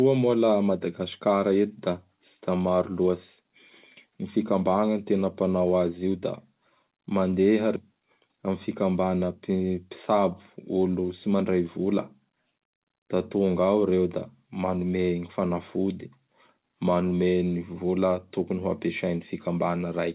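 At 7.76 to 7.78 s a skip ahead drops roughly 0.4 s of speech. The waveform joins two mismatched segments with no gap, and the spectrogram shows an abrupt edge. From 8.33 to 8.75 s a jitter buffer speed-up trims pitch periods, running speech at 107% with the same pitch. It sounds briefly hurried, and the spectrogram shows slightly compressed syllables within the band that stops at 4 kHz.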